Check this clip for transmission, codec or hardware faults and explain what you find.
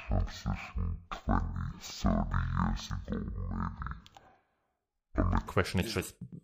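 One fault: stereo read as mono, from 0.0 to 5.48 s. Interleaved left and right samples are taken as consecutive samples of one channel, so the speech runs at half speed and an octave low, with a faint mirrored copy in the upper spectrum that a plain sample-rate mismatch wouldn't produce.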